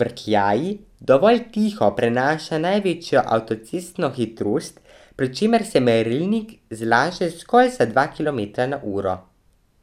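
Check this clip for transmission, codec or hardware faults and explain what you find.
The speech signal is technically intact, with no faults to report anywhere in it.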